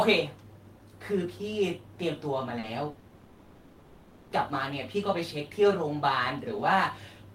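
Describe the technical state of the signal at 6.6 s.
At 6.6 s the speech signal is intact, with no dropout, clipping, glitch or other fault to be heard.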